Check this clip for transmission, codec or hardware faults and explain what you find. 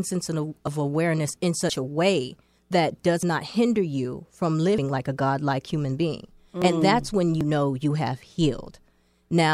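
Yes, there is one fault, repeated six times. The speech skips abruptly at 0.67, 1.7, 3.23, 4.78, 6.62 and 7.41 s, for example just after "that's when". Each skip is a jump forward with no silence. Roughly 20 to 70 ms goes missing. The likely cause is a dropped buffer (overrun), where samples were overwritten before they were read.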